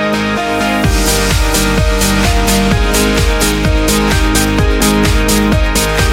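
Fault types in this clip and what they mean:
Dropped buffer (overrun): the program likely failed to read a block of samples before the hardware overwrote it, so the audio either side is joined directly. At 4.81 s the audio jumps ahead by a millisecond or two, with no silent gap.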